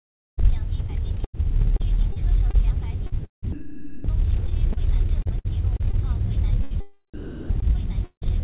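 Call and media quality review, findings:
Sound chopped by the voice detector, 0.39 to 4.04 s. Quieter passages drop out and are swapped for comfort noise, close to 1 s of it across the span. Likely sender-side VAD gating with standard comfort-noise fill.

Repeated packet loss (robotic sound), 4.46 to 5.95 s. Nine short holes, longest about 59 ms, roughly 0.22 s of sound missing. Each hole is patched by extending the previous sound. Result is choppy. Jitter buffer concealing repeated late or lost packets.

Burst of packet loss, 6.63 to 6.73 s. About 80 ms missing. Receiver stretches the last sound into a held, fading tail, then playback resumes further on. Concealment over a short run of consecutive lost packets.

Sound chopped by the voice detector again, 7.14 to 8.39 s. Roughly 0.37 s replaced by comfort noise. Likely the same choppy gating and synthetic background as the first span.

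Long network dropout, 8.04 to 8.23 s, inside that span. About 0.18 s never played. A fading concealment tail gives way to roughly 0.11 s of silence before audio returns. Likely cause is a stall in packet arrival.

Band limit: nothing above 4 kHz throughout. This fits a G.711 A-law call path at 64 kbps.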